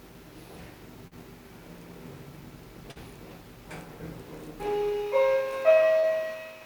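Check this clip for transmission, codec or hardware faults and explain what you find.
Three short concealed packet losses occur, at 1.07 s, 2.91 s and 5.99 s, each spanning about 0.07 s. In each case roughly 40 ms of audio failed to reach the decoder in time, and the receiver bridged the hole by extending the preceding sound, as pitched continuation or shaped noise, for about 37 to 43 ms before crossfading back to the real signal. Each event is heard as a brief smear or wobble.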